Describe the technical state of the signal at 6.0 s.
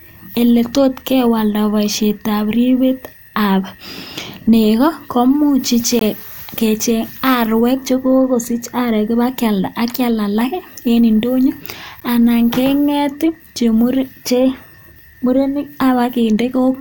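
Right at 5.99 to 6.01 s there's a gap between stream segments: the timestamps leave about 19 ms uncovered at the 6.0 s boundary, so the speech drops to a hard-edged silent hole.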